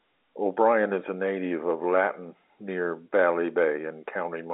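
No technical faults can be heard anywhere in the speech. It carries the narrow band of a G.711 A-law telephone line, roughly 250 Hz to 3.7 kHz with nothing above 3.8 kHz, and the coding's own grain is faint at most.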